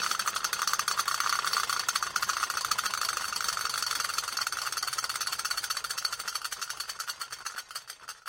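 At 7.03 s the sound briefly jumps forward, consistent with a dropped buffer (overrun). The likely cause is that the program failed to read its samples in time, so the hardware overwrote a few milliseconds of audio and the two sides were spliced together with no gap. On a waveform this shows as a sudden discontinuity in level and phase. On a spectrogram it appears as a thin vertical broadband line at that instant.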